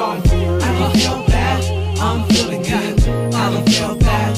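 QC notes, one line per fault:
No faults heard in this clip.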